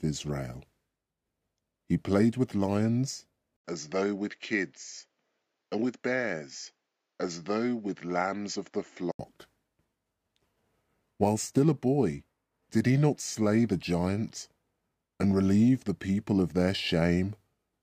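At 3.57 s, after "played with lions", an 80 ms gap leads into a duller, slightly quieter stretch with nothing above 7.6 kHz and a faint new noise floor, likely an input switched to a poorer device. Full bandwidth returns at 9.19 s.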